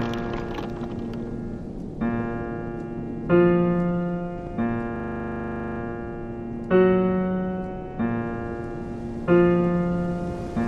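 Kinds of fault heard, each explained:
System hang loop: from 4.96 to 5.8 s, the playback system stalls while the sound hardware keeps replaying the same 40 ms stretch of its ring buffer, so one tiny fragment repeats exactly about 21 times. At a 25 Hz repeat rate this comes across as a rapid, rattling buzz-stutter with a fixed pitch-like pulse rather than moving sound. When the system recovers, the audio resumes with little or nothing missing.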